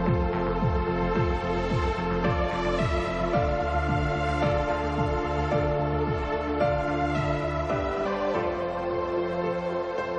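At 8.05 s there is damaged data in a compressed stream. Data in that stretch was corrupted or lost. The decoder could not read those frames cleanly and had to resync on a later frame header. The result is a short, harsh blip.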